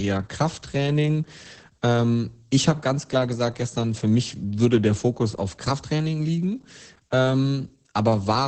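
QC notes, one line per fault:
Throughout: Opus voice compression, heavy. The speech sounds muffled, hoarse and slightly robotic, which fits the SILK linear-prediction coder running near 10 kbps in wideband mode, where the band stops at 8 kHz and the excitation is coded coarsely. On a spectrogram, energy ends in a flat shelf at 8 kHz with smeared, grainy harmonics below it, possibly showing a faint 20 ms frame rhythm. The waveform looks smoother and less detailed than clean speech.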